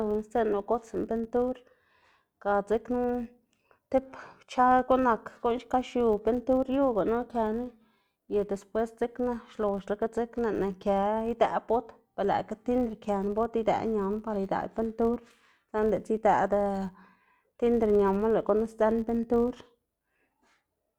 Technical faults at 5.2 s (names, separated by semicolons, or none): filter restarted on every block